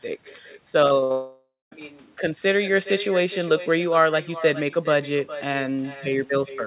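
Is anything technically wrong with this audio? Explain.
Yes, a few things. The whole clip has echo with no canceller: a quieter, thinner copy of the speech trails it by roughly 0.4 s at about 13 dB down. The far end is playing the call on a speaker, its mic picks that up, and nothing strips it out before it comes back.

Around the one-second mark there's a cluster of network trouble. First, a burst of packet loss from 0.86 to 0.93 s: the receiver held the last sound for about 47 ms while fading it, so you get a brief buzz or hiss before the audio jumps ahead. A second burst from 1.04 to 1.12 s does the same over 60 ms.

Squeezed between them, from 1.00 to 1.04 s, is a short concealed packet loss. About 20 ms never arrived in time, and the decoder papered over it by extending the last sound and blending back in, which leaves a small smear or wobble.

Right after that, from 1.12 to 1.73 s, the sound stretches into a fading buzz or hiss for most of that span and then drops to about 220 ms of silence before the speech picks up again further along. 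That's most likely a long network dropout, with around 0.6 s of audio never delivered. All of this sits on top of a G.711 mu-law path at 64 kbps, so nothing is present above 4 kHz.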